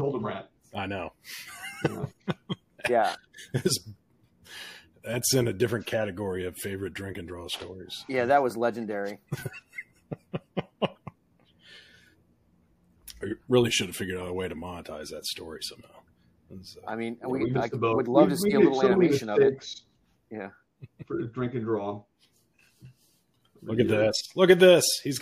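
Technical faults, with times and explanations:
10.96 s, corrupt frame decoded: a single damaged compressed frame got played anyway, so misread data throws a faint blip, peaking around -55 dBFS, into the wrong frequencies.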